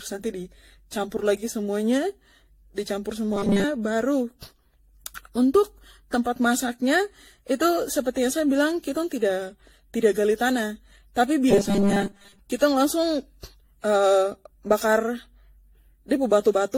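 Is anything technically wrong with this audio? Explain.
Yes, two faults are audible in this speech.

Throughout the clip there is generation loss, likely from the audio being run through AAC-LC at about 64 kbit/s several times over. Each new encode quantises the signal again on a shifted frame grid, so the errors stack. The result is swirly, hollow and smeared, with soft, blurred consonant attacks and nothing above 16.5 kHz. A single 64 kbit/s encode would sound cleaner. This accumulated, washy hollowness is what separates it from ordinary low-bitrate artefacts.

From 3.34 to 3.64 s, just after "di campur", the speech turns into robotic sound from repeated short buffers. The likely cause is audio arriving too slowly, so the playback repeats its last short slice while most of the real signal during that stretch is skipped. The repeats impose a steady 200 Hz buzz, which fits a 5 ms buffer. 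It produces a rigid, metallic tone that still roughly tracks the speech. Unlike a dropout or a stutter, the sound never falls silent or jumps back audibly.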